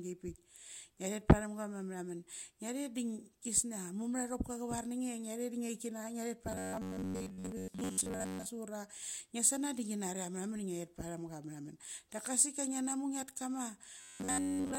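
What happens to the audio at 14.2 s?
The speech becomes a rigid metallic buzz at 93.8 Hz from 14.01 s to 14.79 s. This is robotic sound from repeated short buffers, likely about 11 ms chunks looping while most new audio is skipped.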